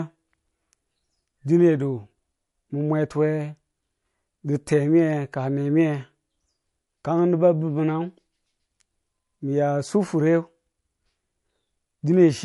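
Throughout, plainly audible MP3 compression likely cuts everything above 11.3 kHz, and s sounds swirl and warble, unlike a clean low-pass filter.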